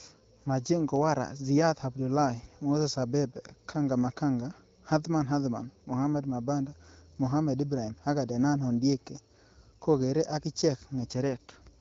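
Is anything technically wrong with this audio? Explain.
No, nothing in this speech clip is technically wrong. It has passed through an AMR wideband (HD Voice) path at 12.65 kbit/s, which keeps the speech clear and leaves nothing above about 7.6 kHz.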